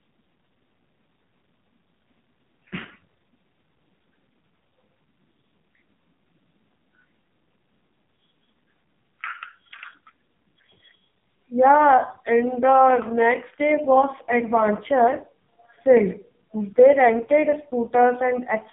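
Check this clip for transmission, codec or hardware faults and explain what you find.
The speech passes through an AMR narrowband mobile codec, and the damage is heavy. It runs the whole clip. Nothing above 3.7 kHz survives, and the line band sits between 150 Hz and 3.6 kHz, so the voice sounds thin and boxed in. The codec rebuilds each 20 ms frame from a vocal-tract filter fed by a few sparse pulses. Here it sounds very starved, which fits the lowest 4.75 kbps mode. That leaves the voice buzzy and synthetic.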